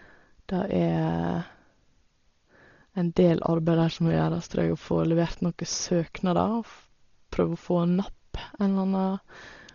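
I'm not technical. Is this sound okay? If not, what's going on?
No. From start to finish the speech sounds dull and muffled, with nothing above about 7 kHz, and a rough, fluttering hiss clings to it. That points to heavy Dolby Digital compression, likely squeezed so hard that missing detail gets replaced with noise.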